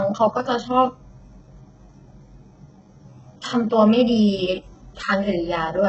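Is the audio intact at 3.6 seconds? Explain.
No. At 3.6 seconds the speech has nothing above 8 kHz, and the band limit runs through the whole clip. It sounds dull. This is likely low-bitrate audio saved at a high bitrate. The large file cannot restore what the earlier, harsher encoding discarded.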